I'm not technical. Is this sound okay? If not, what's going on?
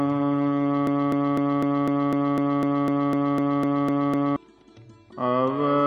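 No. From 0.87 s to 4.36 s there is a broken-record loop. A short piece, about a quarter of a second long, plays 14 times in a row. Whatever should have played then is lost. The player or stream likely stalled.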